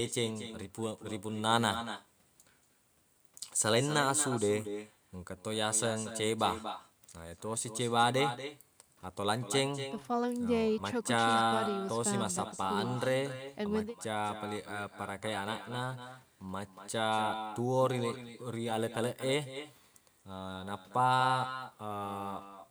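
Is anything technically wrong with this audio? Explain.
Yes, there is echo with no canceller throughout: far-end loudspeaker sound re-enters its microphone, so each phrase repeats about a fifth of a second later, about 10 dB quieter and thinner. On a spectrogram it shows as faint delayed copies trailing every syllable.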